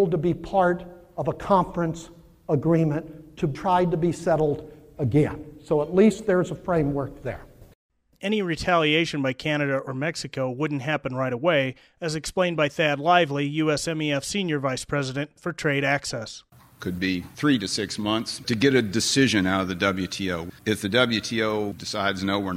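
No technical faults can be heard anywhere in the recording, and the signal holds steady throughout.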